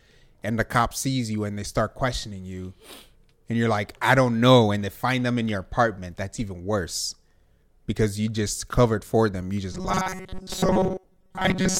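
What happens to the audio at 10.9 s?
At 10.9 s the speech is caught in robotic sound from repeated short buffers, which runs from 9.72 s, right after "covered for them you", to the end of the clip. Audio likely arrived too seldom, so a roughly 5.3 ms slice was looped while most of the real signal was skipped, forcing a metallic 188 Hz buzz. A spectrogram shows rigid, flat harmonics at multiples of 188 Hz, and the waveform shows identical short cycles repeating.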